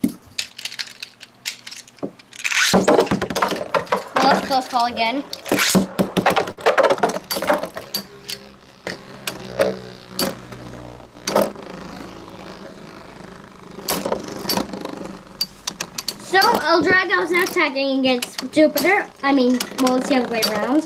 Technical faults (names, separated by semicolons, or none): hard clipping; burst of packet loss